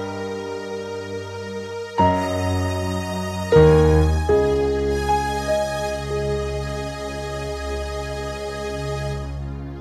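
No technical faults can be heard anywhere in the audio.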